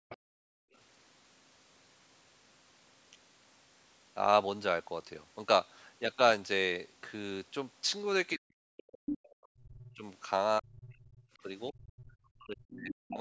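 A speech clip from a call path, band-limited to nothing above 8 kHz by the call's mic processing, with a few echo-canceller problems. You get speech suppressed in double talk right at the start, 0.0 to 0.11 s, and again from 8.35 to 13.19 s, where the talker dips and chops out by as much as roughly 40 dB, about three seconds in total. That's likely the canceller failing to separate the talker from loudspeaker echo while both sides spoke, so it pulled everything down. Alongside that, the other side's voice is leaking through, briefly at 0.1 to 0.17 s and then from 9.07 to 12.14 s. It sits roughly 20 to 25 dB under the talker, likely residual loudspeaker echo the canceller didn't fully remove. Separately, the background is gated by the echo canceller from 0.39 to 0.73 s. The room tone drops by about 39 dB for around 300 ms as the canceller clamps the mic during playback, then it comes back once it lets go.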